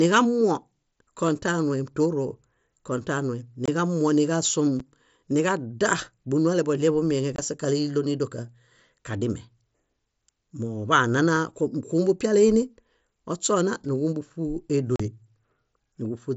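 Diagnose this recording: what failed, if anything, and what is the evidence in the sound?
Unconcealed Bluetooth headset packet loss on the headset link. Speech cuts out abruptly at 3.66–3.68, 4.8, 7.36–7.39 and 14.96–15.0 s. Lost frames become silence or an idle pattern.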